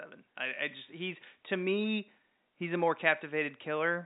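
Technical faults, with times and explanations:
No technical faults can be heard in this speech clip.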